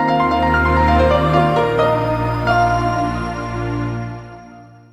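Nothing goes wrong anywhere in this audio, so there's no fault to point to at any moment.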